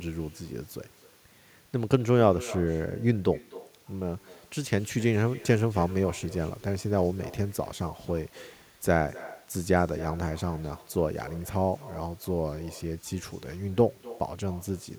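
Right through the speech there's echo with no canceller: the far end's loudspeaker leaks into its mic, so the talker's voice returns roughly a third of a second later, about 19 dB down.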